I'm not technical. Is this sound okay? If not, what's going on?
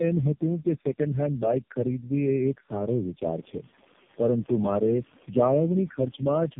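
No. The speech has tandem speech coding throughout. The call seems to have crossed several phone networks, each squeezing the voice with its own codec and unpacking it again. Each pass builds on the last one's damage, so the speech sounds rough, muffled and warbly, with nothing above 3.6 kHz. The room noise behind it gets noticeably louder around 3.5 seconds.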